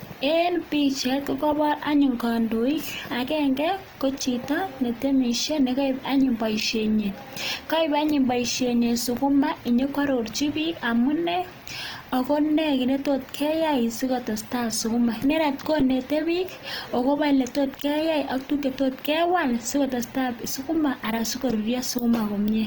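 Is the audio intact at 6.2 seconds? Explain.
No. At 6.2 seconds, as across the whole speech clip, the sound is rough and grainy, with a noisy, textured edge on the speech, yet the top end still reaches about 20.2 kHz, so nothing is muffled. This is likely Opus compression in its CELT music mode, at a rate that fits about 24 kbps: short of bits, the encoder keeps each band's energy but refills detail with folded lower bands or noise, trading clean tone for grain.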